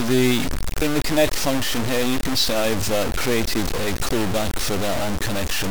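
Throughout, the sound is heavily grainy, with gritty distortion tracking the signal and quiet parts dropping to silence or sputtering; likely low bit depth without dither, truncated to about 3 bits.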